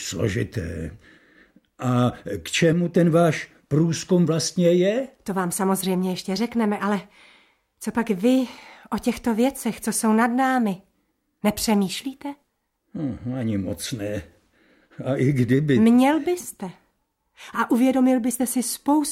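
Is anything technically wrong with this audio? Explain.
Yes, there is a sudden gain jump. From 2.73 to 2.95 s the level drops by about 5 dB in a single step and then returns. Both the sound and its background noise fall together, which points to a digital gain setting that was likely applied instantly rather than ramped. On the waveform the envelope shows a hard-edged step down and back up. On a spectrogram a vertical band appears where every frequency dims uniformly.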